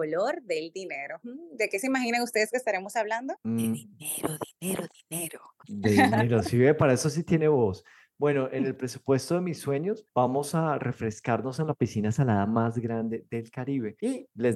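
No technical fault can be heard anywhere in the audio. Nothing interrupts or alters the sound at any point.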